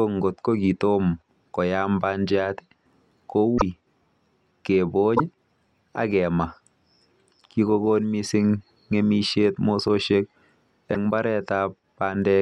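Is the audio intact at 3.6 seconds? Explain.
No. From 3.57 to 3.62 s the speech skips ahead with a brief chirp, burst of noise or short hole, likely a broken MP3 bit reservoir: frames are missing, so the next frame decodes borrowed bytes from the wrong frame. Unlike a plain dropout, which pauses and resumes, the audio jumps forward.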